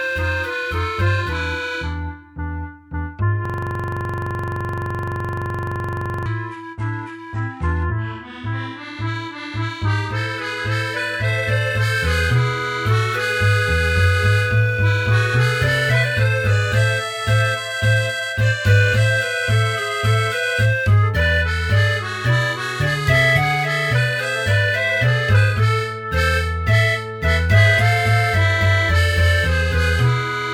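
From 3.45 s to 6.26 s a system hang loop takes over: the system stalled while the audio hardware kept replaying its ring buffer. A 42.67 ms fragment, which fits a 2048-sample buffer, repeats 66 times, giving a rapid stutter at 23.4 Hz.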